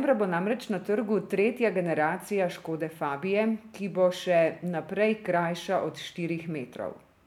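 The speech recording shows no technical faults at any point, with the signal continuous and intact throughout.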